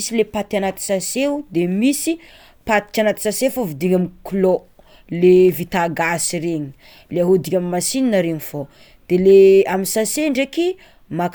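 No technical faults can be heard in this recording.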